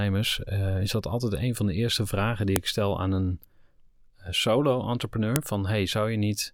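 At 2.56 s, between "de eerste vragen die" and "ik stel aan een", a sharp, loud click cuts across the speech, and a second snap follows at 5.36 s. Both are the file header played as audio: the recording was assembled from separate WAV pieces joined without stripping their headers, so a few dozen bytes of header data are decoded as samples at each join. The result is an abrupt transient unrelated to the speech signal around it.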